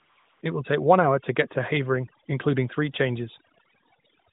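From 0.0 to 0.42 s the opening is AMR comfort noise: the phone treated the start as silence and sent no speech frames, so the receiver filled those 415 ms with a steady, smooth synthetic hiss built from a coarse level and spectrum estimate, which cuts off abruptly when real audio begins.

Across the whole clip there is overdone noise removal. The suppressor was set too aggressively, pulling individual frequency bands down or out whenever they came near its noise estimate. The pauses drop to near silence with twinkling specks, and quiet components of the speech are stripped away along with the noise. Beneath this, the narrowband mobile codec band-limits the sound to 4 kHz, with only the light coloration expected of the 12.2 kbps AMR-NB mode.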